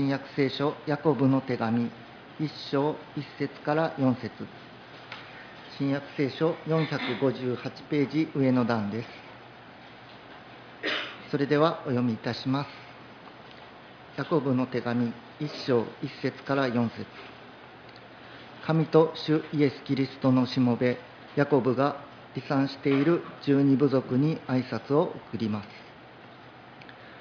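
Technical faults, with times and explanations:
No technical faults detected at any point in the clip.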